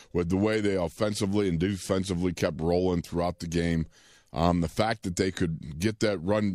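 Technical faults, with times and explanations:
No technical faults can be heard in this speech recording. Nothing in it calls for a time or an explanation.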